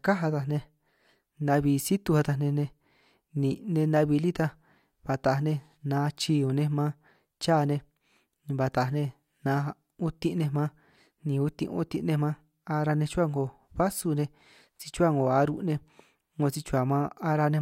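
No technical faults can be heard at any point in the speech.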